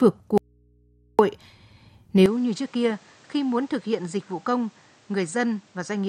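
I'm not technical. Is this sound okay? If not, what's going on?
No. From 0.38 to 1.19 s there is an audio dropout to a faint residue. The speech vanishes, leaving only a low hum, likely a brief signal loss.

From 2.26 s to the end, the input switched to a poorer device, likely another microphone. The speech turns duller, quieter and noisier at once.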